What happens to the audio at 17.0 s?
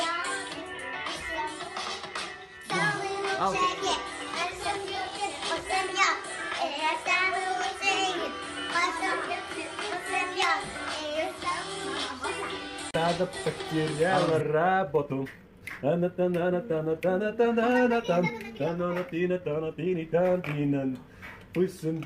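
At 17.0 s you're inside a time-stretched section running from 14.71 to 20.43 s. The pace jumps to about 1.54 times normal while pitch holds steady, likely software squeezing the audio to fit a length by dropping short pieces, so it sounds rushed.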